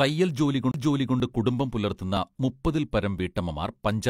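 At 0.72 to 0.74 s a CD skip cuts in. The laser jumped to another turn of the disc's spiral, and the player muted for about 30 ms before resuming elsewhere. It sounds like a tick and an abrupt jump. A spectrogram shows a brief blank strip edged by a broadband vertical line.

At 1.20 to 1.24 s and again at 3.19 to 3.22 s, overlap between stream segments trims away sound that wasn't actually duplicated, at boundaries that fit 1-second segments. Each appears as a click or tiny skip and shows in the waveform as a sudden step.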